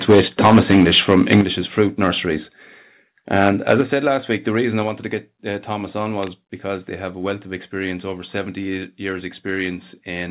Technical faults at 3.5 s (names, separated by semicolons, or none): microphone overload